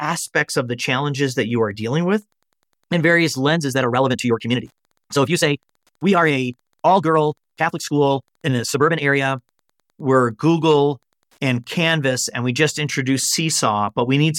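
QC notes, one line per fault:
throughout, Wi-Fi interference: very faint ticking about ten times a second, roughly 50 dB below the speech, from a nearby radio's 102.4 ms beacon rectified in the audio circuit.
3.53 to 9.21 s, time-stretched section: the pace abruptly rushes at 1.58 times speed with pitch unchanged, likely from software dropping short pieces to shorten the audio.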